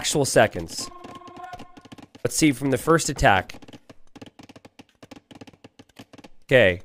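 At 1.58 s, 3.56 s and 5.54 s the sound jumps forward abruptly, each time losing a sliver of roughly 20 ms and closing the gap with no silence, so the join lands as a small skip. The steady spacing of about two seconds points to audio missing between chunks, likely from a recorder or processor working in 2-second blocks and dropping a short piece each time it finishes one block and starts the next.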